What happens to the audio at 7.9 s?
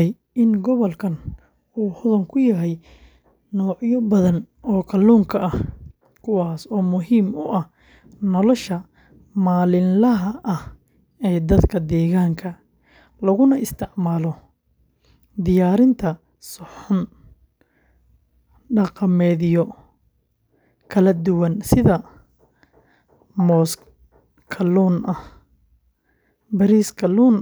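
Nothing goes wrong at 7.9 s: the speech carries on intact through that moment, with no dropout, click, glitch or other fault.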